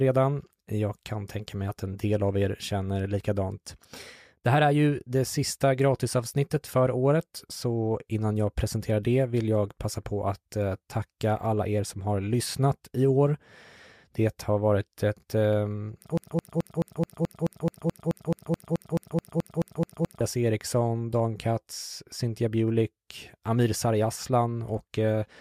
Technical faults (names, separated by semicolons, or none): broken-record loop